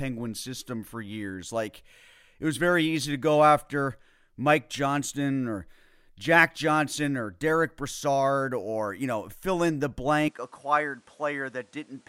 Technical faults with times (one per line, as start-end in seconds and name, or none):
10.28-12.09 input switched to a poorer device